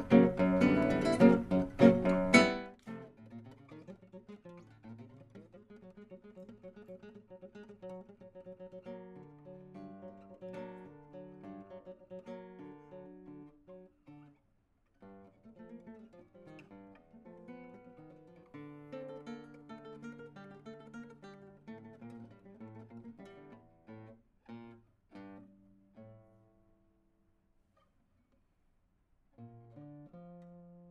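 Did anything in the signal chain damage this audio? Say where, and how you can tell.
No, nothing damaged this audio.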